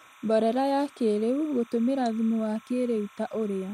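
Timecode bleed runs throughout the speech: a 30-frame linear timecode signal leaks in well below the speech, chirping steadily between pitches around 1 and 2 kHz.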